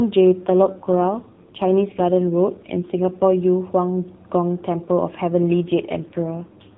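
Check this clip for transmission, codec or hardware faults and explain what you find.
Two stretches of the speech are affected by an AMR rate drop. From 0.42 to 3.36 s, and again from 5.65 s to the end, the voice turns rougher and more synthetic, with no gap and no change in the narrowband frequency range. This fits the codec being switched from 12.2 kbps to about 5.9 kbps, so that the link can spend its bits on error protection.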